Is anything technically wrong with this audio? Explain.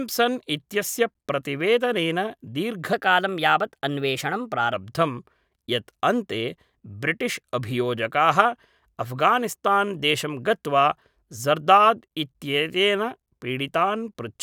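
Yes. From 2.93 to 4.73 s the speech abruptly turns hurried and higher, then snaps back to normal. This is a section at the wrong speed. That stretch runs 1.12 times too fast, lifting pitch by about two semitones, likely from being played or edited against a mismatched clock.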